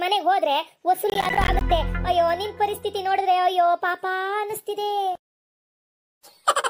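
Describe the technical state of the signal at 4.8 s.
At 4.8 s the signal is intact, with no dropout, distortion, glitch or other technical fault present at that moment.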